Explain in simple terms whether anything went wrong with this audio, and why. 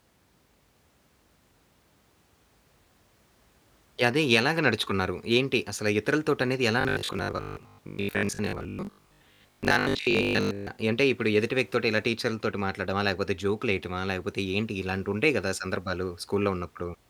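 From 6.81 to 10.79 s, the speech turns into a rigid, metallic buzz at 50 Hz: robotic sound from repeated short buffers. The likely cause is new audio arriving too slowly, so the playback software kept replaying the last 20 ms chunk while the real audio in between was skipped. Roughly two-thirds or more of that stretch is repeated material.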